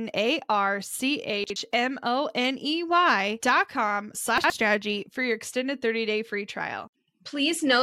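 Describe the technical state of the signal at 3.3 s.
At 3.3 s the audio is intact, with no fault present at that moment.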